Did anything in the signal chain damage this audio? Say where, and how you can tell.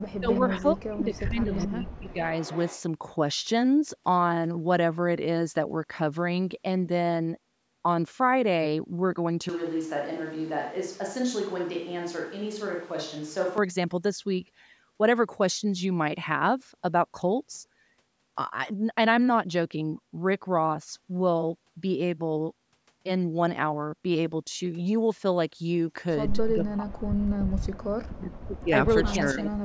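Yes. The damage comes from the call-processing stage, likely the echo canceller on a loudspeaker-side device, and it is concentrated at the start and end of the speech.

Speech suppressed in double talk affects the audio at 0.09–0.31 s, 0.48–2.23 s, 26.54–28.72 s and 29.33–29.64 s. The talker's level dips by as much as about 40 dB. A dropout from network loss would leave gaps at random points. These dips fall only where the other side is talking as well, so the canceller is likely turning down both voices together.

An echo leak is audible at 0.32–0.39 s, 1.53–1.67 s, 2.41–2.81 s and 29.07–29.26 s. In the first three, a faint copy of the voice returns about 430 ms later. The last one, at 29.07 s, comes back after 449 ms. The copies sit about 15 to 25 dB below the speech. Room reverberation would trail off smoothly and immediately after the sound. These copies arrive as one discrete repeat after a fixed delay, which points to sound from a loudspeaker getting past cancellation and being sent back down the line. 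The call's microphone processing also cuts everything above 8 kHz.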